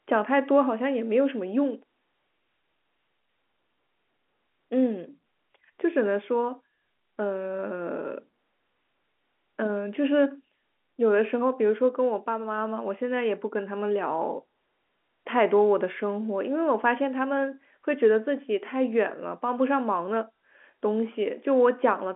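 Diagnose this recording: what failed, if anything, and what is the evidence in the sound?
Nothing failed: the speech carries the narrow band of an ordinary telephone line, roughly 250 Hz to 3.4 kHz with nothing above about 3.8 kHz, as G.711 telephone coding (A-law) gives it, and any coding trace is faint at most.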